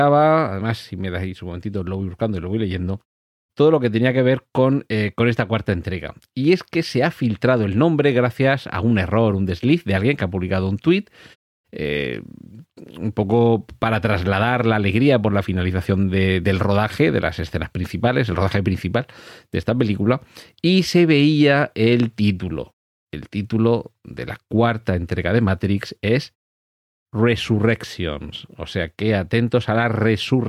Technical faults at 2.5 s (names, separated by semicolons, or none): none